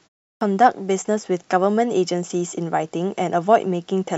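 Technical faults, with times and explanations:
0.36–0.41 s, clipped start after a pause: The sound begins abruptly after 0.36 s of silence. Its first 51 ms are missing. The output device dropped into a sleep state during the pause and had not fully woken when sound resumed, so the onset was swallowed.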